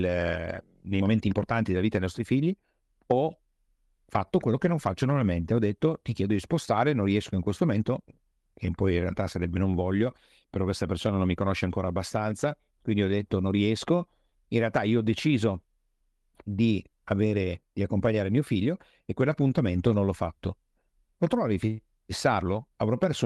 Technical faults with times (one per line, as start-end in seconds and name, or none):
0.00-23.25 clock drift between sender and receiver
0.10-23.25 repeated timing corrections